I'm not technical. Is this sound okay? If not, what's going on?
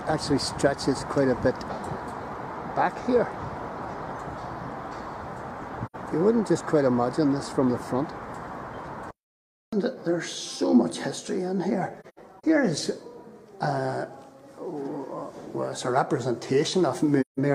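No. There is AAC frame loss with muting: the sound briefly fades into silence and back, with soft edges, at 5.86 s, scattered between 12.00 and 12.44 s, and at 17.20 s.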